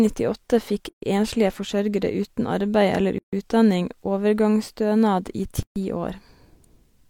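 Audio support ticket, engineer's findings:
Gap at a join of encoded pieces at 0.89–1.02 s (before "enslige forsørgere uten arbeid"), 3.18–3.33 s (before "utdanning overgangsstønad i") and 5.63–5.76 s. Each silence runs about 130–145 ms. Speech resumes exactly where it stopped, with nothing skipped, unlike packet loss. The edges are codec-smeared. Separately encoded segments were concatenated untrimmed, so encoder start delay and final-frame padding were kept.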